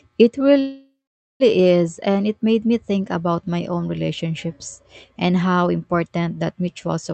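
From 0.59 to 1.43 s, a fading buzz then silence before the speech resumes intact: a call audio freeze, likely delayed packets emptying the jitter buffer.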